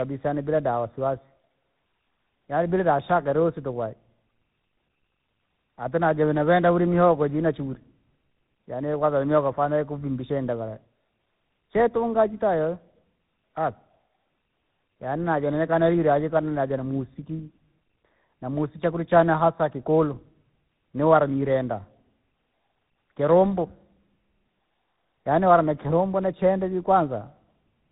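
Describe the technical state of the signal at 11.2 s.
At 11.2 s you're hearing tandem speech coding, which runs through the whole clip. The speech went through GSM full rate, then G.711, then G.726 at 32 kbit/s, each coder re-encoding the last one's damage, so it sounds rough, warbly and muffled, with nothing above about 3.9 kHz.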